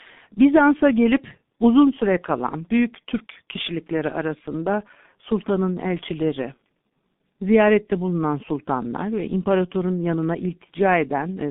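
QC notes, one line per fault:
throughout: G.723.1 codec. The speech is boxed into a narrow telephone band. Nothing much reaches below about 150 Hz or above 3.6 kHz, so it's muffled and thin. The codec's voice model works in coarse 30 ms chunks and updates sluggishly, which leaves the tone hoarse and smears consonants into each other. The damage is heavy, and the sound fits a very low rate of around 6 kbit/s.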